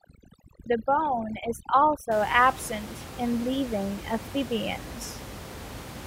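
Speech, with overdone noise removal from the start to 2.11 s, just before "absent in living". An over-aggressive noise reduction stage is gating individual frequency bands whenever they dip near its noise estimate, so quiet speech detail disappears along with the background. The gaps drop away and break up into twinkling specks. On a spectrogram, that stretch shows ragged, blotchy speech harmonics, holes cut out of the quieter bands, and isolated dots of energy scattered across an otherwise blank background. After 2.11 s, the room noise returns as a floor roughly 14 dB below the speech.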